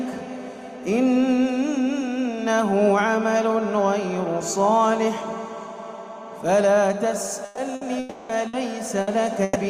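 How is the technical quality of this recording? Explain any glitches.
The last two seconds are repeatedly broken up by lost network data.

Bursts of packet loss occur at 7.45, 7.75, 8.47, 9.01 and 9.43 s. Each time, runs of packets never arrived. The receiver stretched the last sound across gaps of 60 to 120 ms, as a fading buzz or hiss, and resumed with that stretch missing.

From 7.99 to 8.32 s the sound gives way to about 300 ms of continued, decaying tone with no silence. This is likely a long network dropout: incoming audio stopped, concealment filled the whole gap, and the material underneath is lost.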